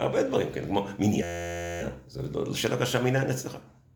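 From 1.23 to 1.81 s a steady 86 Hz buzz replaces the sound: a system hang loop, the stalled system replaying one 11.6 ms buffer (likely 512 samples) about 50 times.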